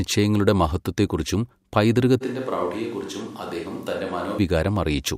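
Speech recording with a likely switch to a distant microphone from 2.23 to 4.37 s. The sound abruptly turns roomy, hollow and bass-light, drops about 5 dB and gains audible background noise, then snaps back, unlike added reverb, which changes only the tail.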